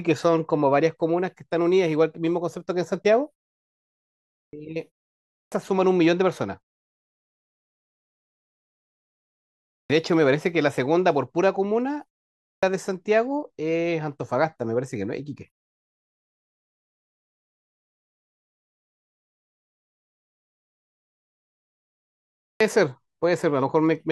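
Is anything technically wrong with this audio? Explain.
Yes. The speech has a clipped start after a pause five times, at 4.38, 5.38, 9.77, 12.48 and 22.47 s, where roughly 0.13 to 0.15 s of the opening is swallowed. The output path appears to idle during silence and needs a moment to wake before passing sound, so each phrase bursts in abruptly without its first sounds. Unlike muted pauses, where only background drops out, here actual speech is lost, even after gaps as short as half a second.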